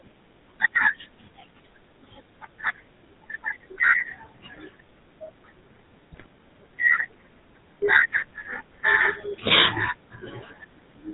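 From the start, the speech carries GSM full-rate codec damage. The coder models the vocal tract and rebuilds it from sparse, regular pulses. Nothing above 4 kHz survives. The result is a plainly buzzy, gravelly roughness, consistent with the 13 kbps GSM full-rate coder.

From 6.12 to 6.26 s, GSM bit errors strike. Corrupted filter, pitch and gain values reach the decoder. The spectrum bends and the level jumps from frame to frame. The speech briefly breaks into squawks, pops and gargling.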